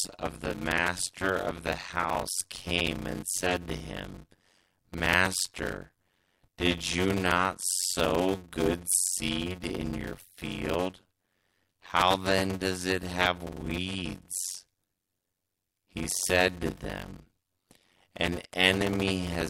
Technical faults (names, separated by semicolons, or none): block size mismatch (padded)